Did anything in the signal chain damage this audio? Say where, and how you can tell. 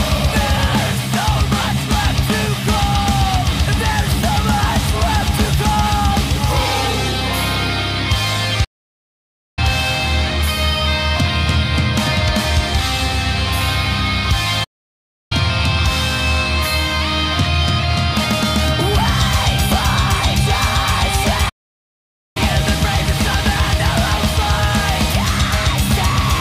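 Yes. Playback stalls interrupt the audio three times: from 8.64 to 9.59 s (about 0.93 s), from 14.64 to 15.32 s (about 0.67 s), and from 21.49 to 22.37 s (about 0.86 s). Each time the sound breaks off mid-flow into silence and then picks up again. This points to the playback stage, likely a player that either ran short of buffered data or had its output thread blocked, so nothing reached the output until it recovered.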